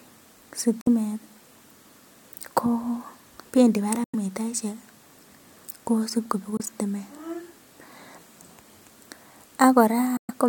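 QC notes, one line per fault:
0.81–0.88 s, 4.04–4.15 s, 6.57–6.62 s, 10.17–10.31 s: Bluetooth dropout. The speech cuts to silence and resumes further along, likely from lost wireless packets. The waveform goes flat and the spectrogram shows clean full-band vertical gaps.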